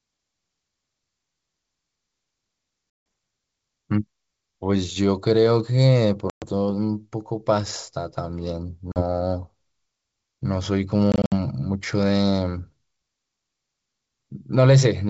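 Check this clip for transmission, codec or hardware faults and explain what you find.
The speech has one transmission fault, packet loss on an ADPCM call, heard over G.722 wideband coding at 64 kbit/s. Silent gaps occur at 2.90 to 3.06 s (160 ms), 6.30 to 6.45 s (120 ms), 8.92 to 9.03 s (40 ms), and 11.12 to 11.33 s, where 120 ms of sound is missing in scattered holes, the longest 60 ms. Whole packets vanish, and the decoder's predictor and step size fall out of step with the sender's. Unlike a simple dropout, each gap ends with speech that returns slightly distorted before the sound recovers.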